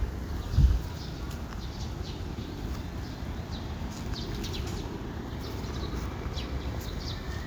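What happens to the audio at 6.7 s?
At 6.7 s the audio carries on intact, with no dropout, click or other fault.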